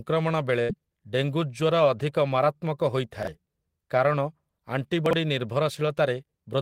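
At 0.61 to 0.71 s, a burst of packet loss removes about 80 ms of speech. The receiver stretches the last sound into a fading buzz or hiss for about 74 ms, then jumps ahead.

At 3.23 s and again at 5.06 s, chunks play out of order. A 23.22 ms chunk arrives one chunk late at 3.23 s and two chunks late at 5.06 s, leaving jumbled joins. Nothing is missing, which distinguishes this from packet loss, and there is no smooth concealment fill.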